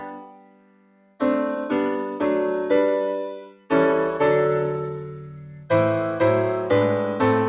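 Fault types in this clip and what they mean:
Noise suppressor applied to music or sounds: A suppressor tuned for speech stays active through the whole clip. It treats steady tones, ambience and decaying tails as noise and pulls them down. Sharp onsets pass while sustained parts sink. The gain swings by roughly 20 dB as it reacts. The result is a pumping, unsteady level and a thinned texture, with held material repeatedly ducking between attacks.
Sound cut by the noise suppressor: Three stretches are pushed down harder than everything around them. The first runs from 0.0 to 1.21 s, for about a second, dropping by as much as about 18 dB. A shorter dip at 3.39 to 3.71 s also falls by about 18 dB. From 5.04 to 5.7 s the cut is milder, about 10 dB. Sustained and fading material loses most. Transients survive.
Pre-emphasis left on: From 2.88 s to the end, a treble boost is applied with no matching cut afterwards. 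The tilt fits a 50 µs FM emphasis curve, rising to about 10 dB at 10 kHz relative to 1 kHz. This clip carries nothing above 4 kHz, so on this G.711 call path the lift shows only in the upper band. That part sounds bright, thin and edgy.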